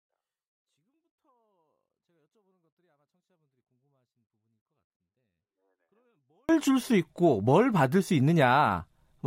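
From 0 to 6.49 s there is a 24-bit alignment error (too quiet): 24-bit samples sitting in the low bytes of each 32-bit word are read as full 32-bit integers, so the speech stays clean but falls by about 48 dB, nearly inaudible.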